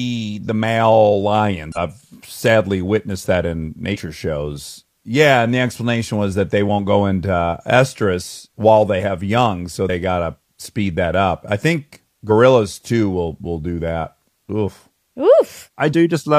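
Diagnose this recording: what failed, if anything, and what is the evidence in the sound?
Five brief glitches break into the speech, each lasting about 50 to 65 ms: at 1.72 s between "the male" and "sadly witnessed that in", at 3.90 s just after "sadly witnessed that in", at 9.85 s, at 12.26 s between "that up I think" and "too will will do", and at 15.89 s. This points to the codec stage and damaged data in a compressed stream. Corrupted frames were misdecoded, the decoder lost sync, and it recovered at the next valid frame header.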